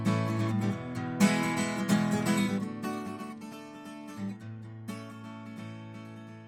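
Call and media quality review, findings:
Bluetooth LC3 compression, throughout the music clip. Plainly audible: grainy, breathy top end and a hissy edge on sustained tones. Likely the LC3 transform codec starving the upper spectrum, zeroing bins and noise-filling them; the damage fits about 48 kbps with 10 ms frames. Spectrogram: speckled, patchy high band, with texture changing in 10 ms blocks; waveform envelope unremarkable.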